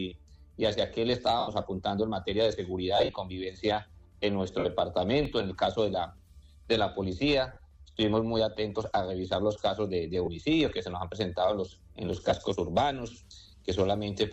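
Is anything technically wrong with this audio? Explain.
Yes, there are two kinds of fault.

Lost LE Audio frames occur at 1.39–1.48 s (82.5 ms), 2.97–3.15 s (135 ms lost in scattered runs across 180 ms, the longest around 50 ms), 4.59–4.65 s (60 ms), 7.53–7.57 s (30 ms), 10.25–10.28 s (22.5 ms) and 12.30–12.32 s (15 ms). The loss durations fit 7.5 ms frames. For each missing frame, the LC3 decoder refilled the gap by repeating the previous spectrum with randomised signs. Steady content therefore smears into a brief noisy wash. In the longer gaps, the smear thins out before the sound returns.

A block of digital silence occurs at 5.25 s (0.67 ms) and at 12.13 s (2.67 ms). The durations suggest blocks of 32 and 128 samples. In each case the output dropped abruptly to silence and then resumed with no fade. The first is heard as a tick. The second is also heard as a tick rather than a gap.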